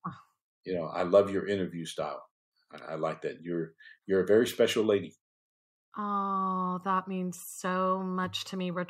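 A speech recording with no technical fault to point to anywhere in it. Nothing in the audio breaks off, jumps or distorts at any moment.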